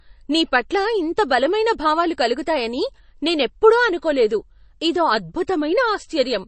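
From start to finish the recording has likely passed through heavy MP3 compression. The encoder was starved of bits, which fits a low bitrate of around 32 kbps. To save bits it removed everything above 8.3 kHz and dropped quieter frequency lines, which then flicker in and out from frame to frame. The damage is plainly audible: the speech sounds dull and watery, with a swirling, metallic edge on s sounds and smeared onsets.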